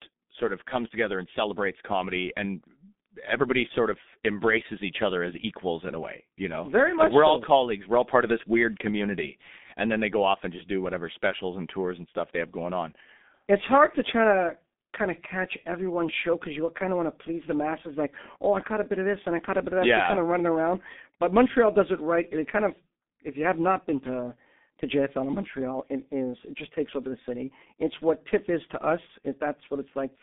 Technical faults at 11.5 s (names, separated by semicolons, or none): G.723.1 codec